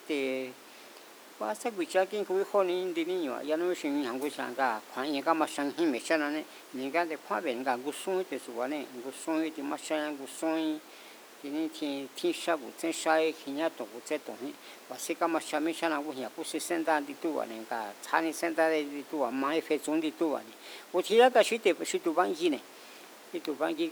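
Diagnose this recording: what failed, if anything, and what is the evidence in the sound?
Nothing in this speech recording has failed at any stage between the microphone and playback. The only thing under the speech is the room's own background noise, sitting about 20 dB below it, which belongs to the recording rather than to the system.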